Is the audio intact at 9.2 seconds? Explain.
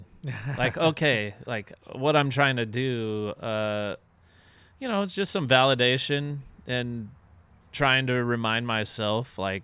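Yes, at 9.2 seconds the speech is intact, with no audible dropout, distortion or other fault at that moment.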